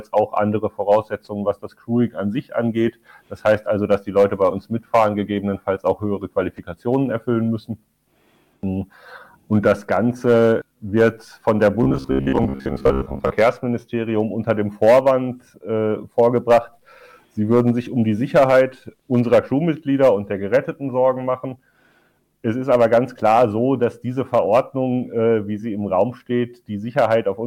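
From 11.83 to 13.35 s the sound turns to a rigid metallic buzz near 66.8 Hz: robotic sound, likely from about half being repeated 15 ms buffers.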